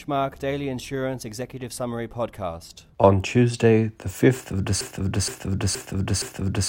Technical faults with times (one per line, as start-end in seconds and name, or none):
4.81-6.68 broken-record loop